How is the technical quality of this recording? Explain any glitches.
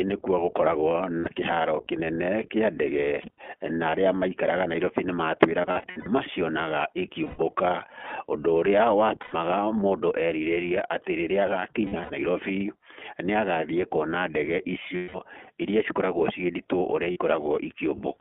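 Quality's pretty rough. The speech runs through the iLBC codec for the whole 18 seconds, and there are eight dropout patches from lost iLBC frames.

The iLBC codec is present throughout. The audio is band-limited to roughly 200 Hz to 3.4 kHz, and each frame is coded independently, which gives it a plainly audible rough, synthetic edge consistent with the 15.2 kbps mode.

Lost iLBC frames occur at 1.20–1.28, 3.22–3.38, 5.62–6.08, 7.24–7.40, 9.22–9.35, 11.82–12.13, 14.96–15.17 (between "kuona ndege" and "irĩa cikoragwo") and 17.12–17.18 s. At each one the decoder repeats the last pitch cycle with added noise, so you hear a held, buzzy vowel. The gaps at 3.2, 5.6 and 11.8 s come in scattered bursts.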